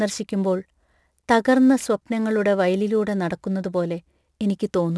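Aliasing runs through the whole speech clip. Content above about 11 kHz was not filtered out before the rate dropped, which points to resampling down to 22 kHz. It folds back as gritty, metallic sibilance, roughly 30 dB below the speech. A clean low-pass would only dull the sound without adding false tones.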